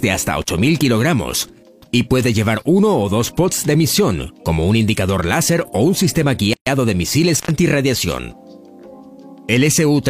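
The audio drops out twice with crackle at the edges, for about 41 ms at 0.42 s and 87 ms at 7.34 s: an intermittent contact briefly opening the line. At 6.53 s a 132 ms gap interrupts continuous sound, which then resumes where it stopped, a gap at a join of encoded pieces left with encoder delay and padding untrimmed.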